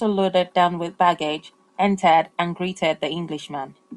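Speech recording with no technical fault audible at any point.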